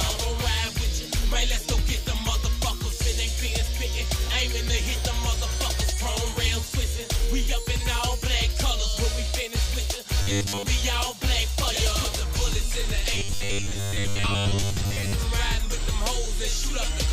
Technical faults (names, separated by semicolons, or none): robotic sound from repeated short buffers